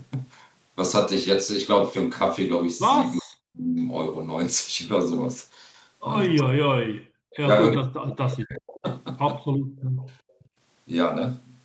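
From 3.21 to 3.75 s, 6.43 to 7.01 s and 7.77 to 8.85 s, the speech sinks by roughly 40 dB. This is speech suppressed in double talk, likely an echo canceller ducking the talker while the far side spoke.

From 8.67 to 8.8 s, a faint delayed copy of the speech returns about 375 ms late, roughly 20 dB down. This is an echo leak, likely from loudspeaker sound the canceller failed to remove.

Between 9.54 and 10.39 s, the room sound drops by about 34 dB, then comes back. This is background gated by the echo canceller, which clamps the microphone hard.

Two fainter echo leaks follow at 9.99 to 10.03 s and 10.39 to 10.49 s. They have the same 375 ms delay and sit roughly 35 dB down.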